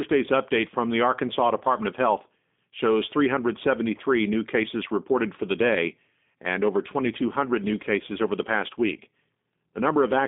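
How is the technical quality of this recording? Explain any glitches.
The whole recording sounds like a narrowband phone call that went through a low-bitrate VoIP codec, and the coding damage is plainly audible.

G.729 codec, throughout: the speech is rebuilt from a vocal tract model and a few pulses, which fits 8 kbit/s. That leaves it rough, slightly synthetic, and cut off above about 3.8 kHz.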